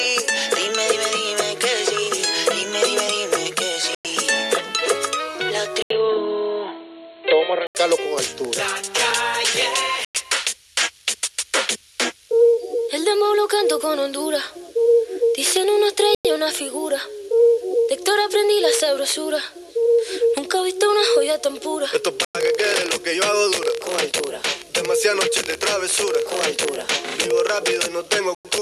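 The audio is interrupted by a gap between chunks five times, at 3.95, 10.05, 16.15, 22.25 and 28.35 s. Each hole lasts 0.1 s. They recur about every 6.1 s, which is 6 s of audio followed by the 0.1 s hole. That regularity suggests the stream was carried in 6 s chunks, with padding or a late start adding silence at each join while nothing in the chunks themselves was lost. Between 5.82 and 7.75 s the sound abruptly goes dull and boxy. Nothing above 4.2 kHz comes through, and a faint new noise floor, roughly 45 dB down, appears underneath. The overall level stays about the same. There's a brief 80 ms silence where it drops in, and then the brightness returns at the end. That's most likely the input switched to a poorer device, such as a headset's call profile, for those two seconds.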